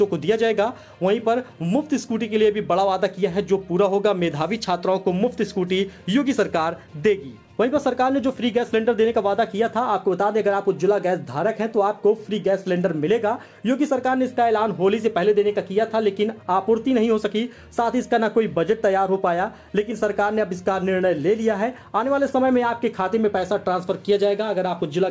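No technical faults can be heard in this audio.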